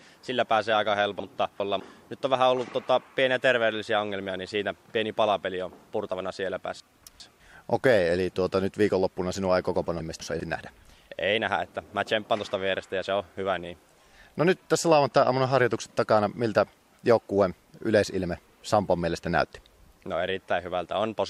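Chunks out of order occur three times: one 200 ms chunk of audio arrived or was written late and was played after chunks that should have followed it. Between 1.2 and 1.8 s and again between 6.8 and 7.4 s, the displaced chunk lands two chunks late. Between 10.0 and 10.4 s it lands one chunk late. Nothing is missing, but each span sounds briefly jumbled, with hard joins where the misplaced chunk meets its neighbours.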